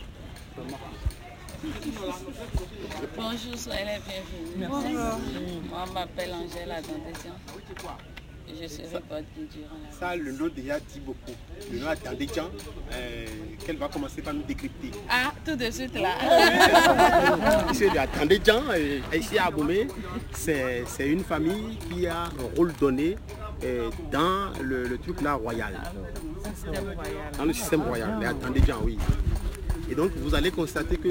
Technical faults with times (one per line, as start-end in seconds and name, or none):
0.00-31.10 imaging from sample-and-hold upsampling